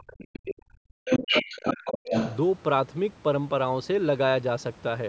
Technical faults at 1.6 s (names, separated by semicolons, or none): speech suppressed in double talk; other side's voice leaking through